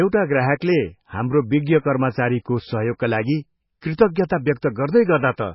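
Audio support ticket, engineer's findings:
MP3 compression, throughout the speech, likely cause: encoder starved of bits, consistent with a very low rate around 16 kbps. Treble cut at a fixed point, nothing above 5.5 kHz, so the top end sounds dull and boxed-in. Weak frequency lines dropped and restored frame by frame, giving a watery, swirling texture over the whole clip. Sibilants turn metallic and chirpy, and consonant attacks smear. Damage heavy throughout.

Pre-echo, 4.15 s: transform codec spread quantisation noise across a whole block while a sharp attack sat late in it. Noise sized for the loud onset leaks into the quiet gap before it, about 14 ms ahead. Heard as a brief hiss just before the attack, which itself lands soft and smeared instead of crisp. Same low-rate encode as above.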